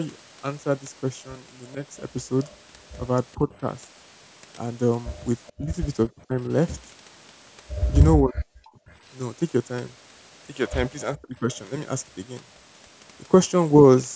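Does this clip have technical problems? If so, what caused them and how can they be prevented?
Yes. A faint copy of the speech returns about 428 ms late at 2.44 to 2.57, 3.52 to 3.58, 5.47 to 6.22 and 8.89 to 8.95 s. This is echo leak, likely from a far-end echo canceller letting loudspeaker sound back into its microphone. Better echo cancellation or a headset would prevent it.

The speech dips sharply, sometimes almost cutting out, at 3.35 to 3.51, 5.54 to 6.37, 8.20 to 8.76 and 11.14 to 11.48 s. This is speech suppressed in double talk, likely from the echo canceller turning everything down while both sides spoke. Avoiding overlapping talk or using a headset would prevent it.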